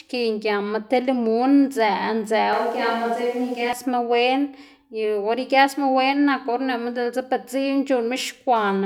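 From 2.53 s to 3.73 s the speech abruptly turns roomy and hollow, losing its low end, then snaps back just as suddenly. The loudness stays roughly the same, but a layer of room noise appears, sitting around 30 dB below the speech. This is a switch to a distant microphone: for that stretch of about 1.2 s, the close mic's signal was most likely dropped and a pickup farther away took over.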